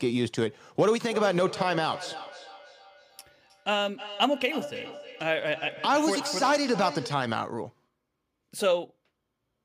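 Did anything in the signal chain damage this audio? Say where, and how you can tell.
Yes. Feedback echo between two devices, at the call-processing stage, from 0.94 to 7.28 s. The speech returns at a fixed interval of about a third of a second, peaking about 13 dB below the speech. A second device replays this microphone's signal, and this device's echo canceller only removes what its own device plays.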